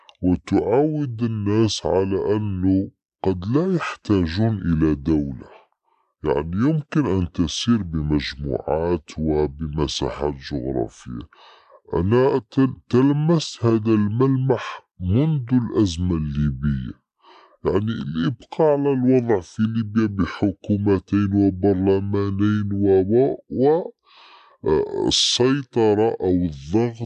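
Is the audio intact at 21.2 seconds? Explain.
No. A wrong sample rate runs throughout: 48 kHz audio played at 32 kHz drags speech to two-thirds speed, about 7 semitones low, with spectrogram harmonics shifted down.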